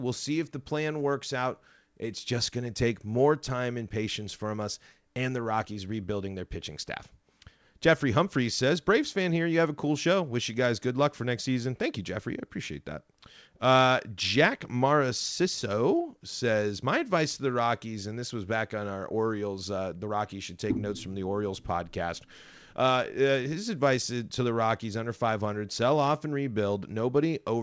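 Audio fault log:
No faults; the speech comes over a WebRTC call path whose G.722 coding at 64 kbps leaves nothing above 8 kHz, as expected for that codec.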